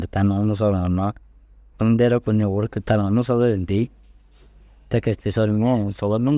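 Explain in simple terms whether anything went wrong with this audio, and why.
Nothing went wrong with this speech recording that a listener can pick out. No moment stands out as broken, so there is nothing here that needs explaining.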